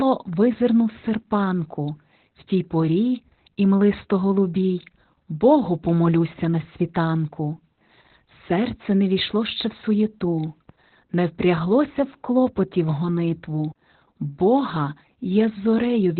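Muffled, hoarse and faintly robotic throughout, this speech recording carries the signature of heavy Opus voice compression. Nothing is present above roughly 4.3 kHz, so consonants lose their edge and the voice sits in a boxed-in, telephone-like band. The coarse, buzzy texture fits the SILK linear-prediction coder working at a very low rate, around 8 kbps. At that rate it falls back to narrowband coding and quantises the excitation roughly in 20 ms frames, which is where the rasp and synthetic quality come from. At 13.72 to 13.76 s there is a CD skip: a brief mute of roughly 40 ms, after which the audio resumes from a different point rather than continuing where it left off. This happens when a knock or a flaw on the disc makes the laser jump to another turn of the spiral.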